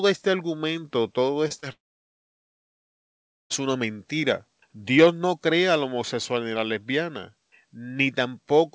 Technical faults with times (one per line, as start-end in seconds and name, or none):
1.48-1.64 short concealed packet loss
1.72-3.52 long network dropout